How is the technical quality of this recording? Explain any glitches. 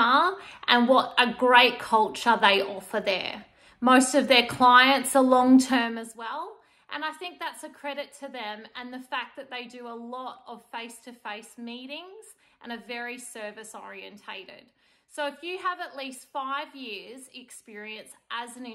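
One glitch stands out: a short burst of zipper noise during a fade. From 5.7 to 6.15 s the level drops by roughly 15 dB, but the gain moves in coarse steps, about a hundred a second, with no smoothing. Each jump leaves a tiny click, so the sound picks up a fine ticking buzz while it dips. On a waveform the envelope looks like a staircase; a spectrogram shows evenly spaced thin vertical lines through that stretch.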